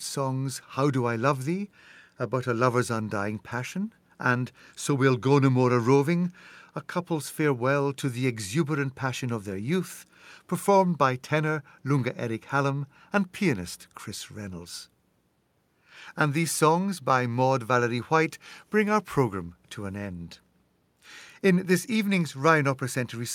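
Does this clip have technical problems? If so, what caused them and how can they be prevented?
No, there are no technical problems in this recording.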